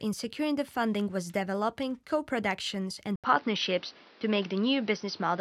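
Input switched to a poorer device at 3.16 s: after an 80 ms gap, sound stays dull, capped at 6 kHz, with faint new noise, likely from another microphone.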